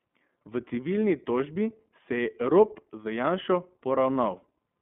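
From start to finish the speech sounds thin, boxed-in and slightly gritty, with a rough, synthetic edge that is plainly audible. The band runs only from about 200 Hz to 3.4 kHz, so sibilants and air are gone and the low end is hollow. This is the iLBC codec at work: each short frame's excitation is coded on its own, which fits 20 ms frames at around 15.2 kbps, leaving that coarse, buzzy texture.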